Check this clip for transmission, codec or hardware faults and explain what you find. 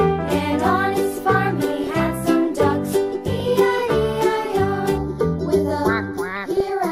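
Several faults are present: codec damage across the whole clip, three bursts of DAB burbling, and comb filtering in the last two seconds.

MP2 compression runs from start to finish and is plainly audible. The top end sounds dull, and a granular, gurgling roughness sits on everything. The likely cause is MPEG Layer II coding at a low rate, somewhere around 80 kbps. With that few bits, the upper sub-bands are switched off and the remaining bands are coarsely quantised. On a spectrogram the high frequencies look ragged and blocky, with bands flickering in and out.

DAB burbling breaks in three times: 1.70 to 2.07 s, 3.36 to 3.44 s, and 6.36 to 6.70 s. Each burst brings short blips of noise in single sub-bands. This points to weak reception. At an error rate of a few tenths of a percent, bit errors slip past the error correction and corrupt samples and scale factors, so individual sub-bands jump in level frame by frame. 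A spectrogram shows isolated rectangular patches of energy at those times.

Channel delay (comb filtering) starts at 4.98 s and lasts to the end. The sound turns hollow and phasey. One channel lags the other by roughly 0.2 ms, and summing the two to mono cancels the shared content at evenly spaced frequencies. The first notch falls near 3 kHz, with further notches repeating above it. On a spectrogram these appear as fixed dark horizontal stripes, while the waveform shows little change.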